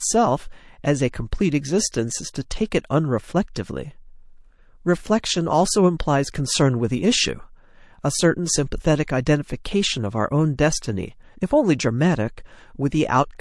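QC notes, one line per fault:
Throughout, MP3 compression: the speech has a watery quality, with a swirly, chirping edge on s sounds, likely from heavy MP3 encoding at a rate that fits roughly 48 kbps. With so few bits, the encoder discards weak frequency lines. Those lines flicker on and off between frames, producing the warble, and consonant attacks are smeared.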